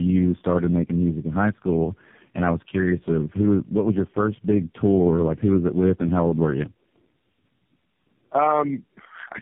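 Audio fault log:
Throughout, tandem speech coding: the audio is rough, muffled and warbly, with nothing above 3.6 kHz. This points to three low-rate speech codecs in a row, each decoding and re-coding the previous one's already degraded output, so artefacts pile up.
1.09–5.01 s, channel delay (comb filtering): the sound turns dull at the top. One channel lags the other by only a couple of samples before the mono sum, placing the first cancellation notch near 10 kHz, so within this narrow band it mostly softens the top.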